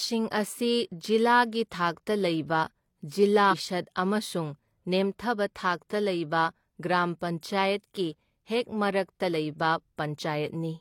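At about 3.48 s the speech gets hit by a short burst of damaged data in the compressed stream, lasting roughly 60 ms until 3.54 s. A stretch of the encoded bytes there is corrupt, so the decoder can't make sense of those frames, drops sync and has to hunt for the next valid frame header before carrying on. What you hear is a quick glitch that cuts across the audio.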